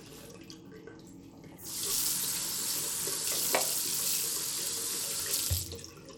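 Bluetooth SBC compression runs through the whole clip. The everyday sound carries plainly audible codec grit and a flickering, unstable treble, with nothing above 19.9 kHz, which fits a starved bit pool of around 96 kbps in the likely SBC link, coarsely quantising its sub-bands.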